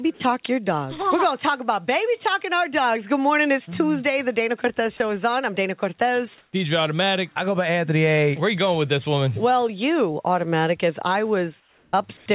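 At 0.14 to 0.2 s, 60 ms of sound gives way to a flat, steady hiss, and about 30 ms of actual sound content is missing before it resumes. This is sound dropped by the voice detector, likely because the sender's detector judged the sound to be background, stopped sending, and let the receiver fill the gap with synthetic noise. What sets it apart from a plain comfort-noise patch is that real sound, not just background, goes missing.

Comfort noise in place of the background appears at 6.38 to 6.53 s, 11.6 to 11.93 s and 12.17 to 12.26 s. In each pause the genuine background, which sits roughly 45, 37 and 32 dB below the loudest passages, turns into a smooth, textureless noise. It is about 3 dB louder in the first case and about 2 dB quieter in the other two. This is likely discontinuous transmission, with the receiver synthesising noise roughly matched to the background during silence. No sound is lost here, only the background's detail and level. 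Throughout the clip nothing is heard above 4 kHz, which points to a narrowband G.711 A-law call path at 64 kbps.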